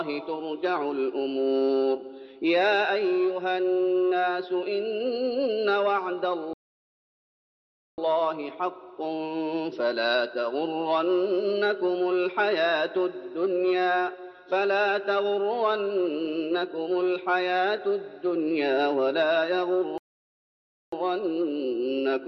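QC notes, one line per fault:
6.53–7.98 s and 19.98–20.93 s, rebuffering stall: playback halts into silence for 1.45 s and then 0.94 s as the player runs out of downloaded audio, then resumes exactly where it stopped. Unlike a dropout, nothing is skipped; the gaps only add time.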